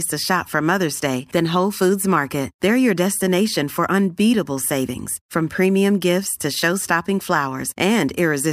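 No technical faults are audible.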